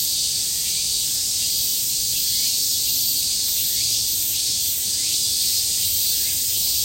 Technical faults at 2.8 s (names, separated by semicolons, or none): none